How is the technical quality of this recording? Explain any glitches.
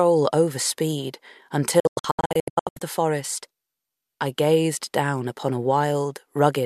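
The recording has one clear glitch. From 1.80 to 2.82 s there is a digital broadcast dropout. The receiver failed to decode incoming frames and muted each bad one with a 3 ms fade, leaving holes totalling 672 ms, the longest 96 ms. Hole sizes suggest frames of about 24 ms. Unlike concealed packet loss, the gaps are true silence, not smeared or repeated audio.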